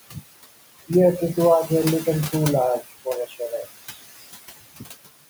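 Throughout this speech recording the background noise rises and falls with the talking. It sinks by about 15 dB in the gaps and swells back under the speech. These are noise suppressor artifacts: the suppressor judges, frame by frame, which frequency bands hold steady noise and pulls them down. The room noise itself, sitting about 14 dB below the speech, is part of the recording, but the suppressor's constant re-estimation makes it pump instead of holding a steady floor. Between 3.27 and 3.52 s part of the speech itself sounds swallowed and faint, dropping by up to about 11 dB over roughly a tenth of a second in total. This is speech cut by the noise suppressor. It mistook those quieter speech sounds for background and turned them down along with the noise.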